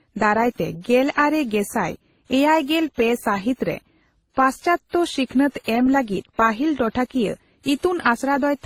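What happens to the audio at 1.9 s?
At 1.9 s, as across the whole clip, the speech carries layered, mismatched compression artefacts, likely from transcoding between lossy codecs, WMA at 32 kbit/s then Opus at 24 kbit/s. That mix sets it apart from a single codec's uniform artefacts.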